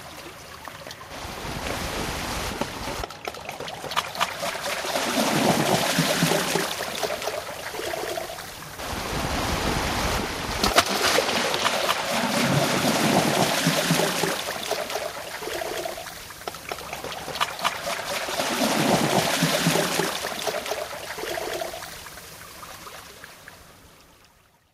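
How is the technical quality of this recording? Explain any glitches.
Listening through these everyday sounds, nothing stood out as a technical problem or glitch.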